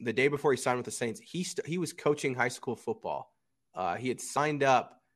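Speech with damaged data in a compressed stream: corrupted frames make the decoder lose sync, giving a brief glitch at 0.36 s and another from 4.34 to 4.37 s.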